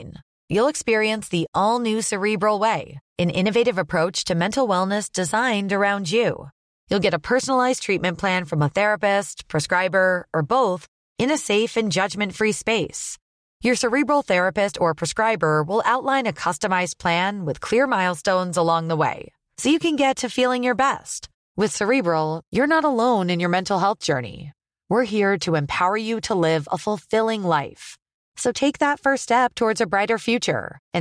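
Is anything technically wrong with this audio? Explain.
No, nothing is technically wrong with this audio.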